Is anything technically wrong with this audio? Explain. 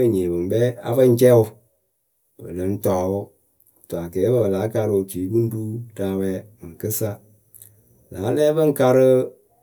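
No, nothing is technically wrong with this audio.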